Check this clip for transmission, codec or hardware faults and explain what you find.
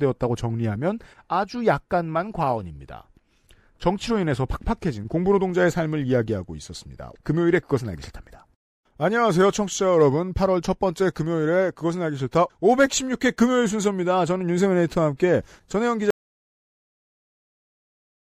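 One fault is present. At 16.10 s the speech stops dead in an audio dropout to silence lasting to the end, likely from lost input while recording continued writing zeros, leaving no room tone.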